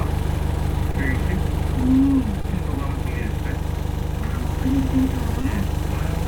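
A recording of sounds with brief smears or wobbles at 0.91, 2.41 and 5.41 s: short concealed packet loss, where about 20 ms went missing and the decoder filled each gap by extending the preceding sound.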